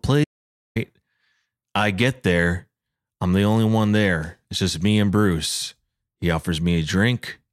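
From 0.24 to 0.76 s the speech falls into an audio dropout to silence of about 0.52 s, likely a lost input. Unlike a quiet pause, the room tone vanishes into silence.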